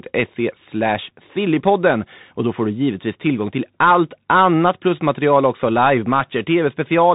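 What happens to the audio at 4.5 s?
At 4.5 s, like the whole clip, the speech runs through a Bluetooth CVSD headset codec, its one-bit adaptive step code cutting everything above 3.8 kHz and leaving scratchy s sounds over a granular hiss.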